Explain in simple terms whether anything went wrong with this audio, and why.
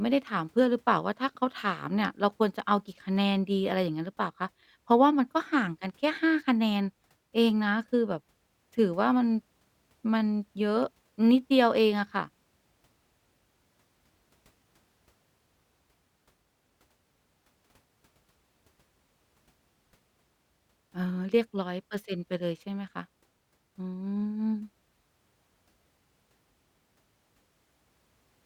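Nothing went wrong here.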